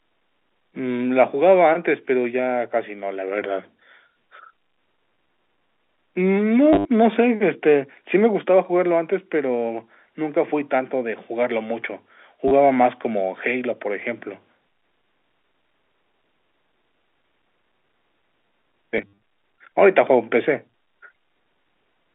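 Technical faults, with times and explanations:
6.73–6.85 s, packet loss with last packet repeated: about 100 ms goes missing across 120 ms, with the longest gap 70 ms. The receiver keeps looping the last chunk it got, so you hear a robotic stutter. The repeats fall out of step with the pitch, which gives a buzz near 100 Hz and fits 10 ms packets.
12.48–12.51 s, packet loss with last packet repeated: a short 30 ms dropout, just a brief buzzy stutter.
18.98–19.18 s, packet loss with last packet repeated: about 120 ms is lost in patches over 200 ms, with the longest run 60 ms. That gives the same stuttering buzz, and it rides on the narrow 250 Hz to 3.5 kHz telephone band of the G.711 A-law line.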